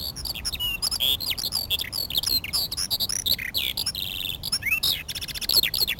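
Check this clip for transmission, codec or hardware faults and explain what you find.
One fault runs through the whole clip: imaging from sample-and-hold upsampling. The sound appears to have been carried at a 16 kHz rate and raised to 44.1 kHz by simply repeating each sample. No smoothing filter removed the mirror copies this creates. The first image fills the band from 8 kHz to 16 kHz, at about 8 dB below the wanted sound. It is heard as a bright, metallic fizz that rises and falls with the sound's level.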